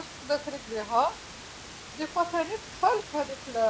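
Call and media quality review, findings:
No faults found in this speech clip. Room noise sits about 14 dB below the speech, and the call path cuts everything above 8 kHz, which fits a wideband codec such as G.722.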